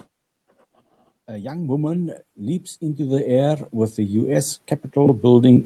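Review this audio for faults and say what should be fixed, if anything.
Automatic gain rising from 1.25 s to the end: the gain control judged the input too quiet and kept raising its gain, so the speech and background swell together. To prevent it, set a fixed input level or slow the automatic gain control so it does not keep climbing.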